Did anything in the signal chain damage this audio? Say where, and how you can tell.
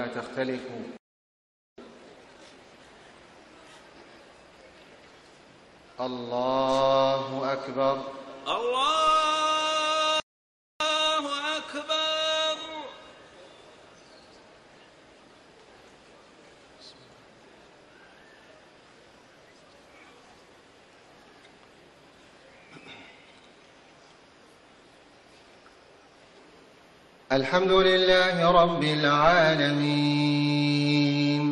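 Yes. The sound cuts out mid-flow from 0.97 to 1.78 s and again from 10.20 to 10.80 s, silences of about 0.81 s and 0.60 s. This is a playback stall, most likely the player's buffer running dry or its output thread being blocked.

Straight after each gap, from 1.78 to 2.58 s and from 10.80 to 11.40 s, the audio rushes at twice normal speed without rising in pitch. This is time-compressed catch-up in the player, which cuts out and cross-fades short slices to clear its backlog.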